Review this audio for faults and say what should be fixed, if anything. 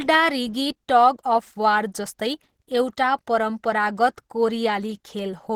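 The speech is muffled and hoarse from start to finish, with a grainy, noisy sheen on the upper frequencies, and it's plainly audible. That's most likely Opus compression, running in its hybrid mode: a speech coder handles the lower band while the music-style coder fills the top with band energy and noise, which is why the highs sound rough. Content still reaches about 20.2 kHz, but the damage fits a rate around 16 kbps. Encode from the original at a higher Opus bitrate so it stays in its cleaner music (CELT) mode.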